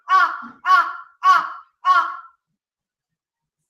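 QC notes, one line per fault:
No faults found.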